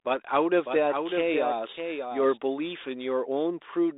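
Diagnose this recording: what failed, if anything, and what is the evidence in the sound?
Doubled audio track from 0.66 to 2.38 s: a second full-band copy of the speech trails by around 0.7 s, roughly 5 dB down, with no reverb tail, and starts and stops abruptly. The likely cause is a slower duplicate capture path or a misaligned edit mixed in.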